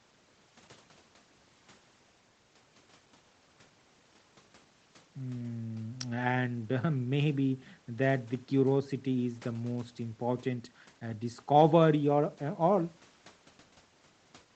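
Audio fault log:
No fault to log for this audio.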